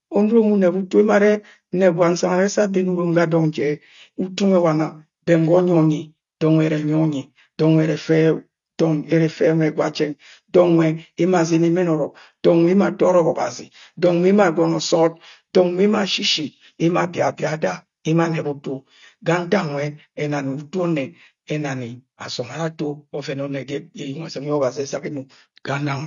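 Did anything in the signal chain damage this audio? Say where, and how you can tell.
Yes, at the codec stage, throughout the whole clip: the speech is missing everything above about 7.1 kHz, and sibilants and sustained vowels carry a watery, fizzy smear. That is the signature of AAC compression, likely AAC-LC at a low rate, fitting something like 32 kbps. Short of bits, the encoder drops the top band entirely and quantises the remaining spectral lines coarsely, so fine detail turns to warble and the speech sounds dull.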